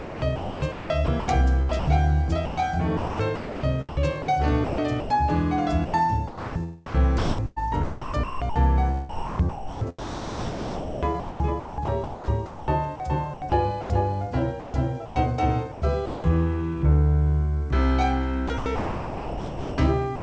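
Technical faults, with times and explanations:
0.00–1.87, 2.45–5.10, 5.86–8.56, 9.09–13.90, 14.60–15.16, 15.72–16.24 and 18.48–20.22 s, sound chopped by the voice detector: the sound keeps dropping out, with quiet edges and soft passages replaced by a flat, hissy fill. Up to about 2.7 s is lost in the 9.09–13.90 s stretch. The likely cause is the sender's voice detector repeatedly gating transmission and substituting comfort noise. Nothing is heard above 8 kHz on the G.722 call path.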